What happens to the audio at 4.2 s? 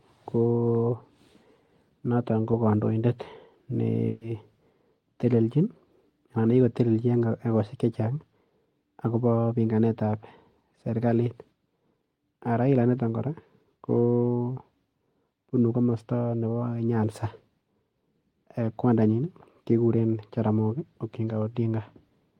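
A burst of packet loss runs from about 4.07 to 4.23 s. Several consecutive packets of this speech never arrived in time to play, so the receiver covered the gap by extending the last sound it had and turning it down as the gap continued, about 140 ms of filled-in audio with no dead silence. Listening through 4.2 s, the speech briefly smears into that fading continuation, then jumps ahead, with roughly 140 ms of the original missing.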